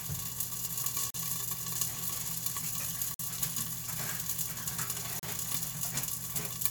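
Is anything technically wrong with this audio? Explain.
Yes. The sound has gaps between stream segments at 1.10 to 1.14 s, 3.14 to 3.20 s and 5.19 to 5.23 s, lasting about 40, 50 and 36 ms. The spacing matches 2-second segments. Where each segment's timestamp ends short of the next one's start, the player pads the difference with silence. The result is a hard-edged dropout with no audio missing. The waveform shows a flat silent strip, and the spectrogram shows a vertical blank band across all frequencies.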